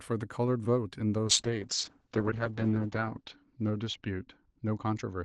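From 1.28 s on, there's a call bitrate drop: coarser coding, the top end falls from 12 kHz to 8 kHz, and speech turns rough and muffled.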